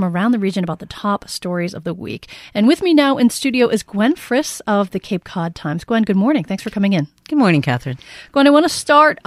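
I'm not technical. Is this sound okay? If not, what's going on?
No. From 0.48 to 5.2 seconds there's a steady buzz under the speech, about 25 little ticks a second. That's a resampler restarted on every block: the audio was converted in 40 ms chunks, each handled separately, so every chunk boundary leaves a tiny glitch.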